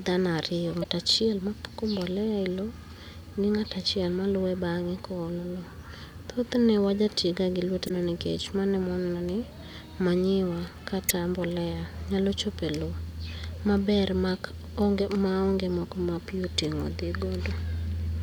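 At 0.80 to 0.85 s, 7.85 to 7.91 s, 11.09 to 11.11 s and 15.01 s the speech breaks into brief glitches from damaged data in the compressed stream: corrupted bytes make the decoder misread frames, lose sync and hunt for the next header.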